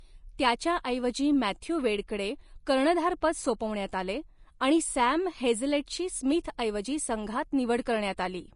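Speech carrying audible Vorbis compression damage throughout: grainy, hissy treble below a hard cut at 10.5 kHz, likely a low-bitrate encode near 35 kbps, with noisy texture rather than a clean low-pass.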